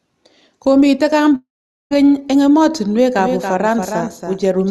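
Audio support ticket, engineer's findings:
Long network dropout, 1.35 to 1.93 s. Sound smears into a fading buzz, then near silence, and resumes with about 0.56 s lost. Likely packet loss, concealment running out.

Doubled audio track, 3.19 s to end. Clean full-band copy about 5 dB down, trailing roughly 0.3 s, starting abruptly. Likely a second, slower capture path mixed in.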